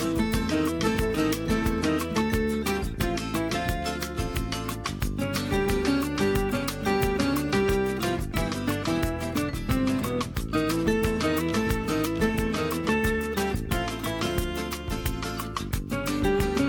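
No technical faults are audible.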